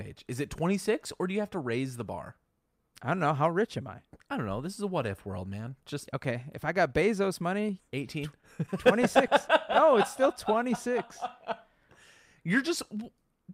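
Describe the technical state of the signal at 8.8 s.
At 8.8 s the signal sits inside a stretch of scattered short gaps running from 7.61 to 9.89 s. Around ten packets went missing or arrived late, each dropout no longer than about 15 ms, and the receiver covered every hole by extending the preceding sound, roughly a tenth of a second of patched audio in all, about 5% of that span. The speech stays clear, but brief ticks, smears and hiccups dot the passage.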